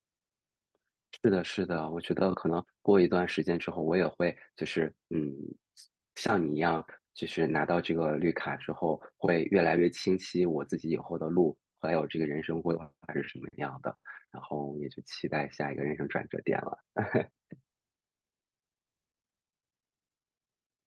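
Clock drift between sender and receiver runs through the whole clip: the sender's clock is about 4 percent fast, so the receiver's jitter buffer keeps overfilling. From 0.57 s to the end you get repeated timing corrections, where the receiver keeps trimming short slivers to catch up. It comes across as small uneven hiccups and a slightly rushed, unsteady pace.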